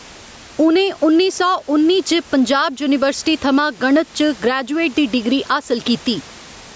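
Gain pumping runs through the whole speech clip. The level swings by about 10 dB. Loud and soft parts end up closer in level, and the sound is squashed. This is likely a fast limiter reacting to input gain set far too high.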